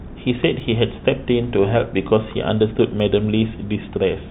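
Dropped samples at 0.60 s and again at 3.00 s produce two isolated sharp clicks in the speech, each a thin vertical line across the spectrum. The likely cause is a tiny piece of the stream, a fraction of a millisecond, going missing, so the waveform jumps straight from one value to a later one. Far too little is lost to remove any sound, so only the click remains, heard against band-limited call audio with nothing above 4 kHz.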